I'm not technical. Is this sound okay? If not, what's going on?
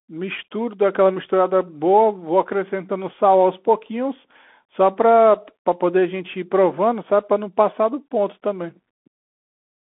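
No. Bluetooth CVSD headset codec damage runs through the whole clip. This headset codec sends the speech as a stream of tiny up-or-down steps and passes nothing above 3.8 kHz, so speech sounds muffled and narrow, with scratchy s sounds and a grainy hiss underneath.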